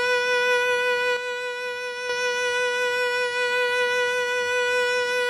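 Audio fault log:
1.17–2.09 s, one channel drops out: for just under a second the music falls abruptly by about 6 dB, then returns at full level. This is likely one stereo channel going silent before the mono sum.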